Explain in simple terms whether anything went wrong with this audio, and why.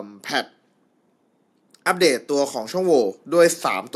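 From 1.7 seconds to the end, the recording gets steadily louder: the voice and the background noise swell together. This is automatic gain rising. The recorder judged the input too quiet and slowly turned up its own volume, lifting everything at once.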